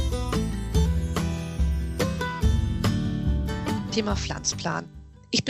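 No technical faults can be heard in this audio.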